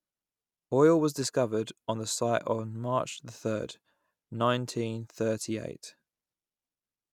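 No technical faults occur at any point in the speech, so there is nothing to describe in time order.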